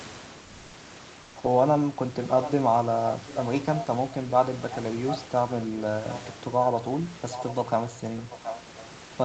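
From 0.45 to 0.73 s, and again from 1.21 to 1.35 s, the quiet background between sounds turns flat and textureless, a smooth hiss about 26 dB below the loud parts, about 1 dB louder in the first gap and about 2 dB quieter in the second. This is comfort noise in place of the background, likely from discontinuous transmission: the sender paused, and the receiver filled the gap with synthetic noise, which fits Opus DTX.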